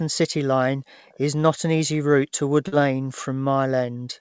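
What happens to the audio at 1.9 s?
Nothing goes wrong at 1.9 s: the speech carries on intact through the call path, with the sound band-limited to about 8 kHz, as a wideband call codec such as G.722 would leave it.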